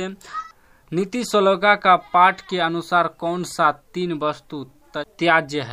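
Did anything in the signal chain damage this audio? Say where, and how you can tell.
No, nothing damaged it.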